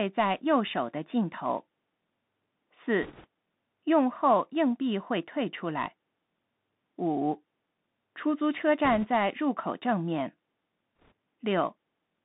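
Thin, boxed-in speech with a granular hiss underneath and scratchy s sounds runs through the whole recording, and everything above about 3.7 kHz is missing, with little below 150 Hz. This is the Bluetooth CVSD headset codec. It codes one bit per sample, stepping up or down with an adaptive step size, at a rate that fits a 64 kbps link. Loud, bright passages outrun the step size and smear, which gives the sibilants their rasp.

Brief bursts of rushing, crackly noise appear from 3.03 to 3.26 s, 8.85 to 9.08 s, and 10.97 to 11.12 s. There are no sharp clicks. These are bit errors on a Bluetooth voice link. Because each CVSD bit nudges the waveform by only one small step, and the decoder's tracking lets each mistake fade, flipped bits turn into a wash of noise rather than pops. The first burst is the roughest, at an error rate of around 5 percent. The later two are lighter, at about 1.5 and 2 percent.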